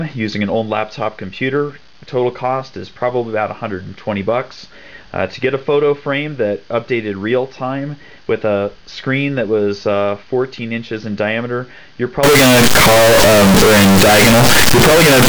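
From 12.23 s to the end at 15.29 s, the audio abruptly becomes extremely loud and harsh, with the waveform flattened into a near-square shape sitting at an almost fixed, high level regardless of how quiet the material was. Quiet background content rises to the same level as the main sound, though pitch remains traceable. This is likely float read as integer: 32-bit floating-point samples decoded as 32-bit integers, so sign and exponent bits dominate each sample's value.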